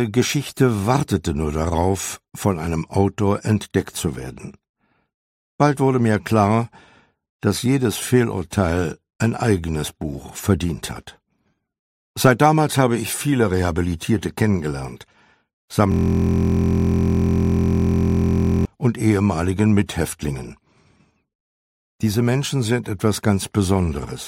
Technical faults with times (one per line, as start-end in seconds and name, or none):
15.92-18.65 system hang loop